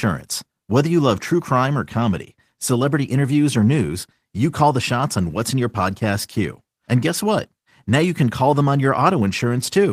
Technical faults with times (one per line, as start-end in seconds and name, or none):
none